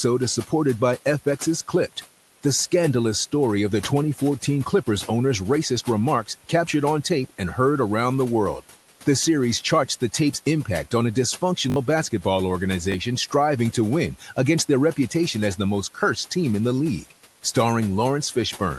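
Noise suppressor artifacts run through the whole recording. The suppressor pulls down the bands it judges to be steady background by about 11 dB. The room noise, sitting roughly 20 dB below the speech, therefore sinks in the gaps and comes back up under the talking. The pumping between the pauses and the speech makes the background sound unstable rather than constant.

A repeated buffer appears at 11.70 to 11.76 s. New audio failed to arrive in time, so playback looped the last block. The repeat length fits a 20 ms buffer, and the sound suggests three extra plays of it, with roughly 70 ms of real audio lost. It comes across as a quick buzzy stutter with hard joins. A second repeated buffer occurs at 12.92 s, just before "striving to win against", with a single extra 20 ms play, about 20 ms lost. That one is a brief click-like hitch.

Speech cut by the noise suppressor follows at 14.20 to 14.37 s, between "striving to win" and "against their reputation as". 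Here the suppressor mistook part of the speech for noise and turned it down with the background, dipping it by up to about 9 dB across roughly a tenth of a second. That stretch sounds swallowed and faint. The speech band is capped at 12 kHz by the Opus call path.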